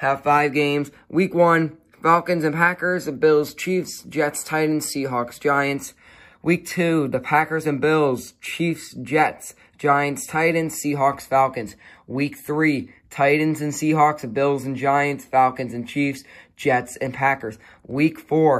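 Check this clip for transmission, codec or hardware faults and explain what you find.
No transmission, codec or hardware faults turn up anywhere in this clip.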